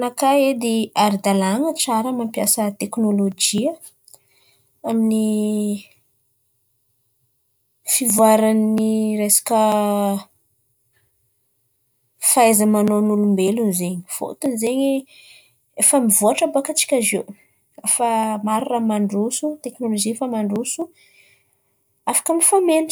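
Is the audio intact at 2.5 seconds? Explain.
Yes, the speech at 2.5 seconds is intact, with no dropout, click, distortion or other fault at that moment.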